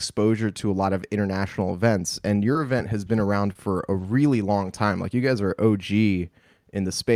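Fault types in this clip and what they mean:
short concealed packet loss, 2.53–2.57 s and 3.53–3.57 s: about 20 ms never arrived, so the decoder extended the preceding sound, leaving a brief smear.
lost packet rebuilt from error correction, twelve 20 ms frames between 2.55 and 4.69 s: each frame is replayed from a low-bitrate backup copy, so there is no gap but the sound is rougher and noisier.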